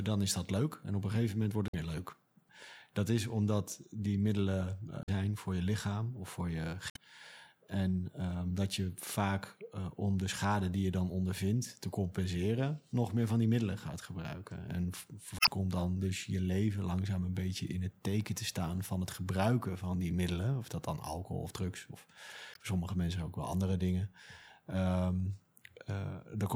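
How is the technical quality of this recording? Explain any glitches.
The recording has five brief glitches from damaged data in a compressed stream, at 1.67–1.75, 5.02–5.09, 6.88–6.97, 15.37–15.49 and 22.53–22.57 s. Corrupted frames make the decoder lose sync. Each brings a short chirp or blip.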